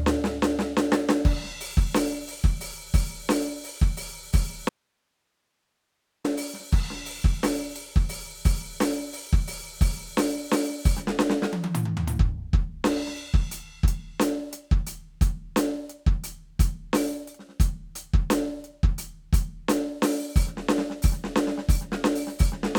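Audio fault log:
4.69–6.24 s, audio dropout to a faint residue: the music cuts out abruptly for about 1.55 s, leaving only hiss roughly 50 dB below the signal, likely from a live path losing its source. Waveform shows a near-flat gap; spectrogram shows only a faint broadband noise floor.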